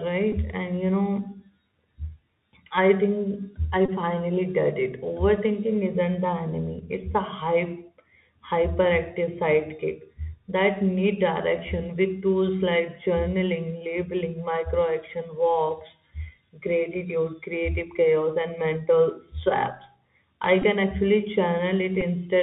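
Speech carried over a Bluetooth CVSD headset codec, with the narrowband, grainy character that implies. Nothing above 4 kHz survives, so the top end is missing throughout, and the damage is plainly audible. The coder sends one up-or-down bit per sample and adapts its step size, which fits a 64 kbps CVSD stream. Where the level rises quickly, the step cannot keep up, so loud bright sounds distort and sibilants turn scratchy, over a steady granular hiss.

Four short dropouts carry the signature of a Bluetooth headset packet repeated. When voice packets between headset and phone go missing, the last packet's bits are decoded again. The first is at 0.32 s, with about 11.2 ms lost, which fits three 3.75 ms packets. The second is the longest, 3.86 to 3.90 s, with about 26.2 ms lost, and the repeats there form a brief buzz near 267 Hz. Shorter ones follow at 20.62 s (about 15.0 ms) and 22.01 s (about 7.5 ms).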